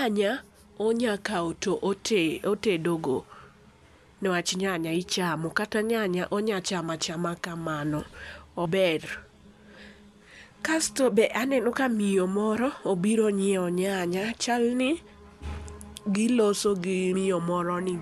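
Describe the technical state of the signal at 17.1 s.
Compressed frames are skipped at 17.14 s. A short run of coded frames, likely missing or rejected as damaged by the decoder, never plays, so the speech jumps ahead by roughly a tenth of a second. This fits about four frames of 26.1 ms. Overlapping neighbour frames turn the join into a brief smeared blip, not a hard click.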